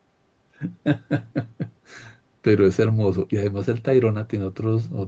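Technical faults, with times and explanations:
Nothing goes wrong in this one; the speech simply sounds like an ordinary call, with the microphone processing and the Opus call path doing their usual job and nothing above 8 kHz.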